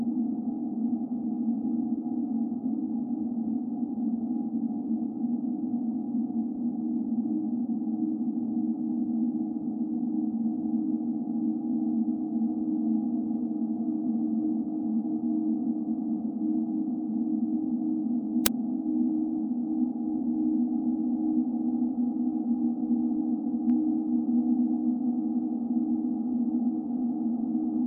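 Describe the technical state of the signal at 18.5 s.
File tags played as audio at 18.46 s: embedded cover-picture data is read as samples, producing a brief, hard-edged snap of very loud white noise.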